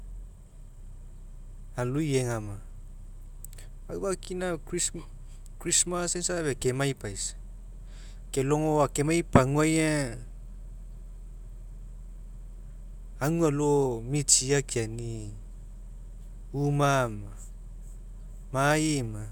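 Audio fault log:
No technical faults can be heard anywhere in the speech signal.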